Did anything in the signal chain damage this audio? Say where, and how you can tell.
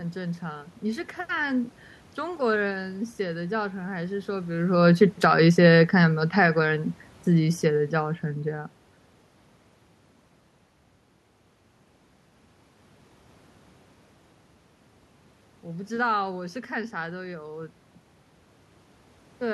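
Yes: automatic gain falling in call processing. From 5.02 to 8.22 s, speech and room noise sink together by about 4 dB as the gain control eases down.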